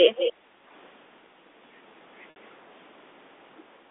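Echo leak, from 0.15 to 0.33 s: a copy of the speech returns about 210 ms after the original, roughly 10 dB down. It is likely caused by the far end's loudspeaker sound reaching its microphone and slipping past an echo canceller that failed to remove it fully.

Background gated by the echo canceller, from 0.33 to 0.69 s: the room sound dips by up to about 11 dB for around 0.4 s, then comes back. The canceller, reacting to loudspeaker playback, pulled the microphone down hard and released it afterwards.

Packet loss with pitch repetition, from 2.30 to 2.36 s: a 60 ms gap, which fits three lost 20 ms packets, is filled by the receiver repeating the last pitch period. It is heard as a held, buzzy tone that fades into silence before speech returns with a short cross-fade, all within the narrow telephone band of the G.711 line.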